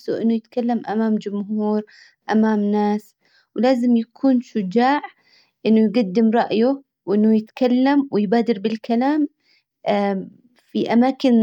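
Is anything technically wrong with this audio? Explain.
No, there's nothing technically wrong here that I can hear, so this bit of speech comes across just as it should all the way along.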